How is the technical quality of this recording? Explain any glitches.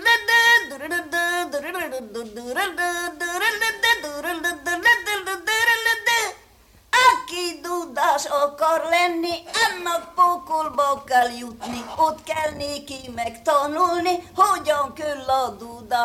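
One fault is audible: GSM signalling bursts from 8.3 s to 11.0 s. A nearby 2G phone sends short radio bursts to the network. The audio circuit rectifies them. The result is galloping ticks and 217 Hz buzzes, about 20 dB below the sound.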